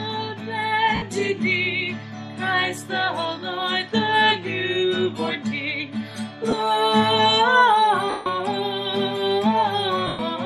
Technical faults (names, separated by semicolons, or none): lost LE Audio frames